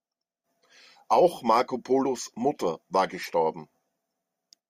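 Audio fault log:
1.60–1.62 s, corrupt frame decoded: a brief, faint chirp or blip cuts across the speech, peaking around -35 dBFS. One compressed frame arrived with damaged bits and was decoded anyway, so misread gains and codes put energy at the wrong frequencies for about one frame.
3.22–3.26 s, corrupt frame decoded: a longer, somewhat louder chirp or burst of noise, near -30 dBFS, from the same kind of damage spread over a couple of consecutive frames.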